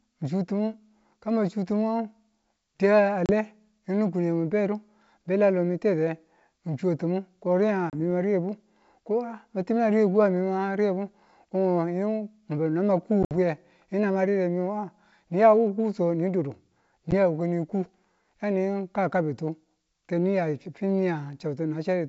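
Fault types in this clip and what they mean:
Packet loss on an ADPCM call: Four hard-edged silent gaps cut into the speech. The first comes at 3.26 s, after "di a", and the second at 7.90 s, after "chuwe ti̱mung ko riyenga". Both last about 30 ms. The longest is a broken run near 13.23 s with 70 ms lost over 80 ms. A brief 10 ms drop follows at 17.11 s. After each gap, the decoder's predictor and step size no longer match the sender's, so the speech comes back slightly distorted before settling.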